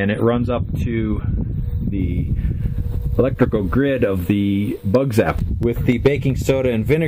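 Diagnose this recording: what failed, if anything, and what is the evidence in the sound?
The playback stage started on a low-bitrate rendition of an adaptive stream. From 0.0 to 2.0 s the treble is thin and smeared, with swirly codec artefacts typical of an MP3 stream around 32 kbit/s. At 2.0 s quality jumps with no gap, consistent with a switch to roughly 128 kbit/s. On a spectrogram the first two seconds show a low, ragged ceiling. After the step the energy extends much higher but still stops cleanly at about 16.1 kHz.

At 4.95 s a sharp snap sits on top of the audio, an electrical switching spike picked up in the analogue wiring. It is most likely from a nearby switch or motor arcing. On the waveform it appears as a near-vertical spike, far narrower than the surrounding signal. On the spectrogram it shows as a thin vertical line running across the whole frequency range for an instant.

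Between 5.63 and 6.07 s there are four CD scratch ticks at a steady rate of about seven per second, a storage-stage fault. Each time the damaged spot came round, the player could not rebuild the data and concealed the gap, leaving tiny clicks, the longest around 1.5 ms. The waveform shows small evenly spaced notches or flattened spots. The spectrogram shows a short row of regularly spaced vertical streaks.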